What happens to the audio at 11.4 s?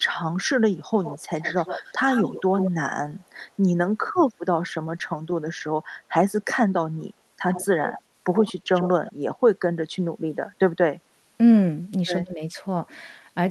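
Nothing goes wrong at 11.4 s: the speech continues intact through that moment, carried by the call path with no dropout, glitch or distortion.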